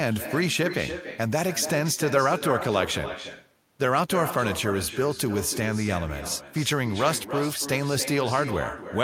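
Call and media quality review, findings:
Echo with no canceller, throughout the speech. Every phrase is shadowed by a quieter, thinner copy. The copy arrives about a third of a second late, about 10 dB down. Probable component: far-end loudspeaker playback feeding its microphone, with no echo cancellation. The talker's own voice returns after the network round trip.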